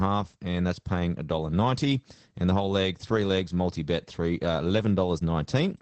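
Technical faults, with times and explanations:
Throughout: Opus voice compression. The speech sounds muffled, slightly hoarse and robotic. Nothing is heard above 8.5 kHz. The coder models the voice as a filter with coarsely coded excitation, which fits wideband SILK mode at a low bitrate around 12 kbps.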